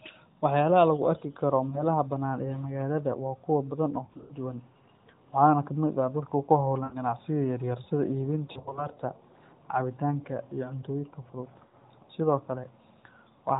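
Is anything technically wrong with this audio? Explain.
Yes, there are lost AMR speech frames at 1.70–1.85, 4.06–4.33, 6.84–6.97, 8.52–8.88 and 11.66–11.84 s. Corrupted frames failed their checksum, so the decoder replayed the last good frame with dropping gain. That gives brief dips at 1.7 and 11.66 s and smeared, fading stretches elsewhere, up to 80 ms, each followed by a rough recovery. The narrowband AMR codec underneath is heard as the 4 kHz band limit with light coding damage, which fits about 12.2 kbps.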